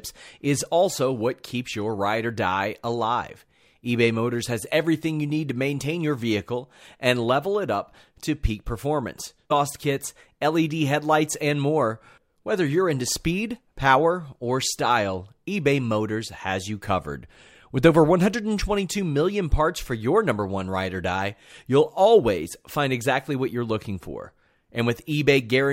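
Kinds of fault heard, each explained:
Stream segment skipped: just after "up to peak performance", at 9.5 s, the speech jumps ahead with a brief blip, likely a stream segment that failed to load.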